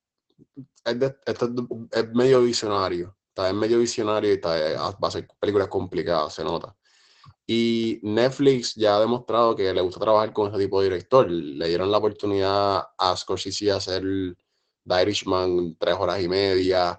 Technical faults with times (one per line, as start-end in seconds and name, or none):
0.00-16.98 Opus voice compression